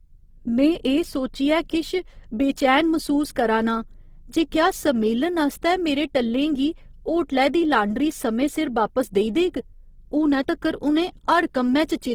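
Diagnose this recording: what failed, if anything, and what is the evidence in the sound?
Opus compression, audible across the whole recording, is a codec-stage failure. The speech sounds grainy and rough rather than swirly, with noisy texture filling in where detail should be, yet the spectrum still extends to about 20.3 kHz, so the band was not narrowed. This is likely the CELT music mode starved of bits, which fits a rate near 16 kbps: band energies are kept, but their contents are rebuilt from folded lower bands or noise.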